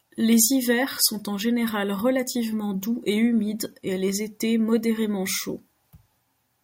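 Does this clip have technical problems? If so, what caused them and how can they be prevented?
No, there are no technical problems in this clip.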